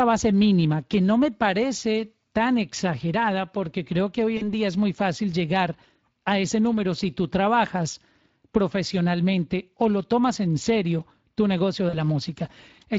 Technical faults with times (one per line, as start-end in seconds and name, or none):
0.00-12.99 Speex codec
4.37-4.49 VoIP packet loss concealed by the speech codec
11.89-11.96 VoIP packet loss concealed by the speech codec